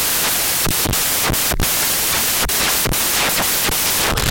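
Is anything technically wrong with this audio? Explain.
Yes. The samples are built from the wrong bytes, and this runs through the whole clip. The reader assembles each sample's bytes incorrectly, either shifted by one byte, in swapped order, or with the wrong alignment. The rapidly changing low bits then land in the high part of every value. The result is loud, harsh broadband noise, close to white on the louder speech.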